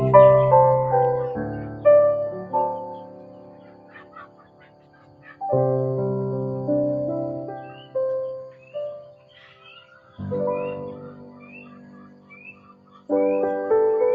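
Over an Opus call path whose spectrum stops at 8 kHz, a noise suppressor built for speech and applied to this non-speech audio treats held tones and decays as noise. The level pumps over a swing of around 10 dB, and the waveform envelope flutters while attacks pass through. Sound is cut by the noise suppressor at 1.53–1.85, 2.32–5.41, 7.70–7.95, 8.50–9.61, 9.92–10.18 and 12.08–13.09 s, dropping by about 7 to 8 dB. These stretches show on the spectrogram as darker, thinned bands with tails chopped short.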